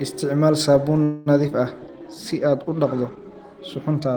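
At 1.03 s the speech stops moving forward. The last sound carries on as a fading buzz or hiss until 1.28 s, about 0.23 s in all. It never drops to silence. When real audio resumes, it picks up where it left off, with nothing lost. This is a call audio freeze. Packets were likely delayed in transit, so the jitter buffer ran dry. The stall adds about 0.23 s of delay.

Short concealed packet loss follows at 1.42, 1.47 and 1.50 s. Each event lasts roughly 30 ms. Small pieces of the call arrived too late for the decoder: about 40 ms, then 20 ms, then 20 ms. The receiver bridged each hole by extending the preceding sound and then blending back in. The result is a quick run of smears or wobbles. The first event also trims roughly 30 ms of the delay built up by the freeze.

A call bitrate drop begins at 1.78 s and lasts to the end. The encoder falls from 32 to 15 kbps and stays at the low rate for about 1.7 s. 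The bandwidth estimate fell, so the speech is coded more coarsely. It turns rougher and more watery. The top end may also sound dulled, since Opus trims high frequencies at low rates.

Overlapping that, from 1.79 to 2.16 s, comes a jitter buffer slow-down. The buffer needed to rebuild its reserve. It repeated single pitch periods and slices of pauses, adding 64 ms. Playback runs at 84 percent speed. The pitch stays the same, but sounds stretch out.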